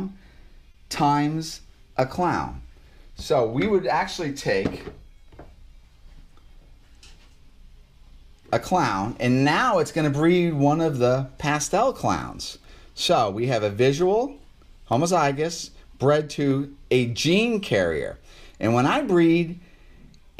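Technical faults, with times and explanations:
0.71 to 0.76 s, short stall from a late packet: the sound briefly hangs, with one moment held too long and a faint buzzy dip before it moves on. A packet arrived late, the jitter buffer emptied, and the receiver stretched the last stretch of audio by about 30 ms to cover the gap. Playback then resumed exactly where it left off, so nothing is lost. The only lasting effect is that everything after it runs 30 ms later.
1.99 s, 4.54 s, 14.93 s, 16.51 s, dropped samples: each is a single sharp, dry click with no gap or stutter, seen as a thin vertical line running up the spectrum. The likely cause is a tiny run of missing samples, well under a millisecond each time, so the waveform jumps abruptly from one value to a later one. That step is far too short to remove any audible sound, which is why the only trace is a click.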